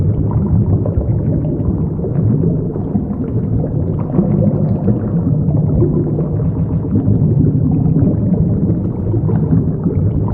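From the start, the whole recording has a doubled audio track: a second full-band copy trails the original by roughly 150 ms, about 5 dB quieter, with no room colour or decay. It's most likely a second, slower capture path or two copies left out of step in an edit.

Then, from 6.56 to 6.84 s, there are repeated frames. A chunk of about 139 ms plays two extra times, so you hear a quick stutter. That fits a run of roughly six compressed frames being sent or written again, and it adds about 0.28 s to the running time.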